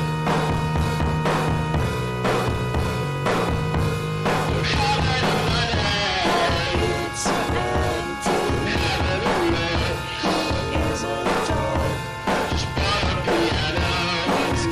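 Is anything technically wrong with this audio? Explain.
No, nothing is technically wrong with this audio.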